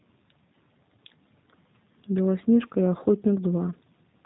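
G.729 codec damage runs throughout this speech clip: nothing above 4 kHz survives, and the voice sounds slightly rough and synthetic, as the coder rebuilds each 10 ms frame from a vocal-tract filter, a pitch predictor and a few pulses, which fits an 8 kbit/s G.729A stream.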